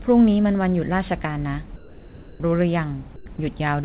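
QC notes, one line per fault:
1.76–2.40 s and 3.16–3.26 s, comfort noise in place of the background: likely discontinuous transmission swaps real background for steady hiss, about 3 and 5 dB quieter; spectrogram shows textureless bands, waveform a flattened floor.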